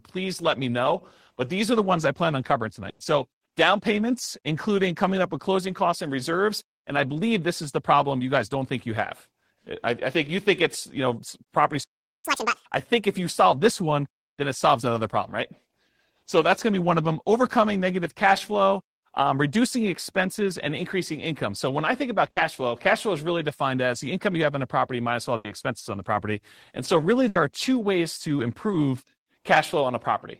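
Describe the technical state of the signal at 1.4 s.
At 1.4 s the speech signal is intact, with no dropout, clipping, distortion or other technical fault audible at that moment.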